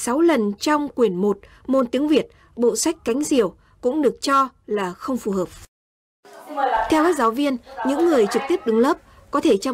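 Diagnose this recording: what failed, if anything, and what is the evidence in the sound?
Hard clipping runs through the whole recording. The loudest peaks are driven about 4 dB past what the stage could pass, so their tops get sliced flat. Only a small fraction of samples, well under one percent, actually hit the ceiling, so you get brief crackly edges on the peaks rather than constant fuzz. The flat tops throw off high harmonics, which is that gritty bite. It points to gain set too hot going into the converter or a fixed-point conversion.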